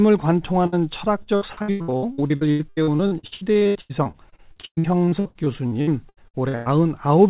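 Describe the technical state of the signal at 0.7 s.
At 0.7 s you're right in the middle of a burst of packet loss, running from about 0.66 to 0.74 s. A run of packets didn't make it in time, so the receiver stretched the last bit of sound it had for roughly 60 ms, fading it down as it went, then jumped ahead. About 60 ms of the real audio is just gone. Everything around it carries the usual G.711 band limit, with nothing above 4 kHz.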